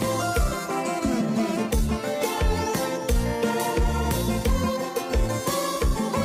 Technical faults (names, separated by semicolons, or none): frames out of order